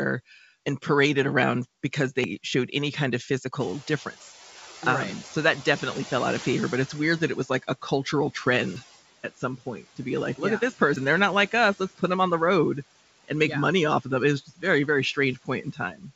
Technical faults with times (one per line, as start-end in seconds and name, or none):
0.00-16.15 noise suppressor artifacts
2.24 dropped buffer (overrun)
3.59-7.24 noise suppressor catching up
4.20 dropped buffer (overrun)
8.76 dropped buffer (overrun)
9.23-9.99 speech cut by the noise suppressor
10.96 dropped buffer (overrun)
11.75-12.02 speech cut by the noise suppressor
14.45-14.64 speech cut by the noise suppressor
15.35-16.15 speech cut by the noise suppressor